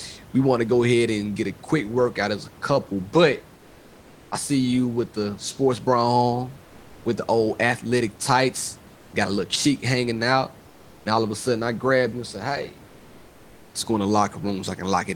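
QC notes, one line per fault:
3.57–4.31, 6.65–7.05, 8.95–9.13, 10.67–11.05 and 12.87–13.73 s: comfort noise in place of the background. In each pause the textured room noise gives way to a smooth, featureless hiss about 1 to 3 dB quieter, likely from Opus discontinuous transmission. On a spectrogram the noise floor goes flat and uniform, with a small level step at each edge.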